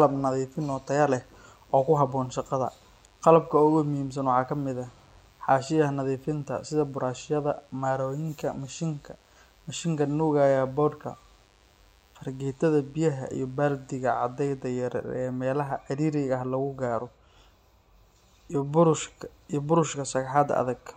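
From the very start of the speech until about 14.68 s, there's a DECT cordless phone buzz sitting underneath everything: a thin, steady buzz at 100 Hz, with lots of harmonics stacked on top giving it that wiry edge. What's happening is a nearby DECT handset or base firing a short radio burst every 10 ms, and something in the audio chain rectifying those bursts into sound. It's well down, roughly 40 dB under the speech, but it's constant until it drops out.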